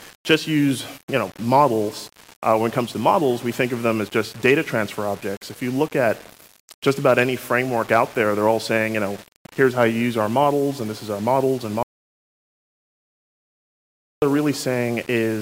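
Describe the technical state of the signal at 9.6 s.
At 9.6 s the audio carries grainy, signal-following distortion, likely low bit depth without dither, present across the whole clip. It fits about 6 bits with plain rounding, putting the error only some 25 dB below the signal. Unlike dithered noise, which stays a steady hiss, this grit rises and falls with the sound.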